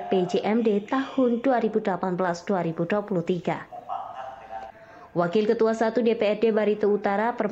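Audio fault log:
No fault can be heard anywhere in the clip. There is nothing to log for any part of the audio.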